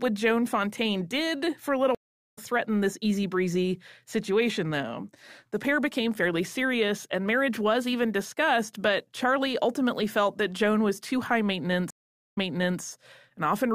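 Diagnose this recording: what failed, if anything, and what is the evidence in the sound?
Speech drops out for 0.4 s after "did for a little" (1.95 s), resuming about 0.3 s later at "threaten this easy breezy"; at 11.90 s, after "was too high", 0.44 s of silence, then 0.47 s replays. A network stream reconnect restarted the decoder mid-stream.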